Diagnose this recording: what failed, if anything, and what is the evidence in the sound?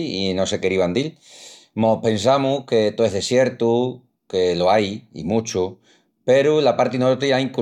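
Nothing here calls for a diagnosis: every stage of the chain seems to have done its job, and the speech comes across with no dropouts, clicks, distortion or other damage.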